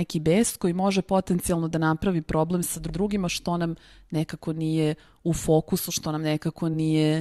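Speech, with repeated frames at 2.89 to 2.99 s, after "da napravi problem sa": a 100 ms block, which fits about five compressed frames, plays twice before "što nam nekako nije". Unlike a dropout, nothing is lost. The sound stutters, and the clip runs 100 ms longer.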